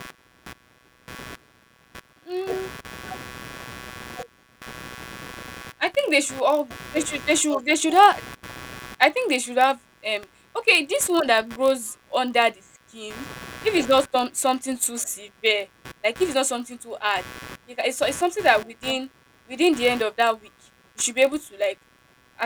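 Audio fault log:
throughout computer activity noise: a buzzing, chirping layer pulsing at around 150 Hz, roughly 20 dB below the speech, rises and falls with the machine's processing load rather than with the talker. Load currents are disturbing the audio circuit's shared ground.
throughout block size mismatch (padded): a steady 43.1 Hz buzz, which fits a 1024-sample read block, comes from a zero-filled gap inserted into every block. Unlike ground noise, it never varies, and the speech runs 0.999 times normal speed with the timbre unchanged.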